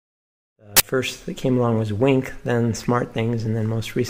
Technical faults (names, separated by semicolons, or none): uninitialised buffer